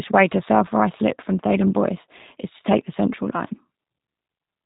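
Throughout, G.729 codec damage leaves the speech plainly rough and synthetic, which fits an 8 kbit/s stream; a spectrogram shows everything cut off at 4 kHz.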